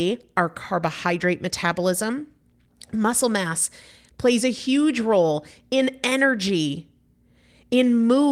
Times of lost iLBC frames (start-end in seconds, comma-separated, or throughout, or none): none